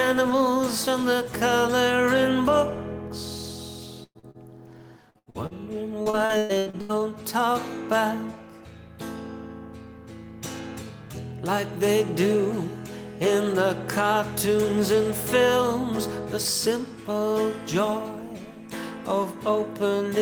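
At 4.03 s a burst of packet loss removes about 120 ms of audio, lasting to 4.18 s. The receiver extends the last sound for roughly 115 ms, fading it down and leaving about 60 ms of near-silence. The audio then resumes past the missing section.

Two short concealed packet losses follow closely, at 4.19 to 4.26 s and 4.31 to 4.37 s. Each drops about 40 ms and is patched by continuing the preceding sound before blending back into real audio, which is heard as a brief smear or wobble.

Repeated packet loss (robotic sound) appears from 5.10 to 5.54 s, with four gaps totalling about 200 ms and the longest about 75 ms. It appears again from 6.03 to 7.00 s, with eight gaps totalling about 440 ms and the longest about 114 ms. Because nearly half of each span is synthesised fill, the sound turns choppy, with pieces missing.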